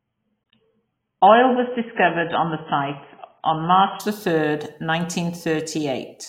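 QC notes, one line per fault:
0.0–4.0 s, adaptive stream starting at a low bitrate: the speech sounds dull and muffled, with nothing above about 3.8 kHz and heavier codec smearing, then at 4.0 s it turns suddenly brighter and cleaner with no gap. The player began on a cheap rendition to start quickly and switched up once it had measured the connection; the change in sound fits a step from roughly 16 kbit/s AAC to 96 kbit/s.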